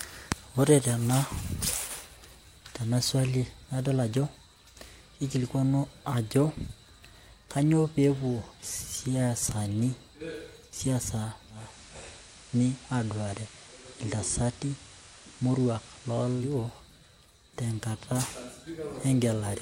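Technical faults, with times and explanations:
11.49 to 16.61 s, digital radio blending to analogue: steady hiss rises to roughly 20 dB below the speech. The receiver lost its digital stream and cross-faded over about 0.3 s to the station's FM broadcast, with no change in level.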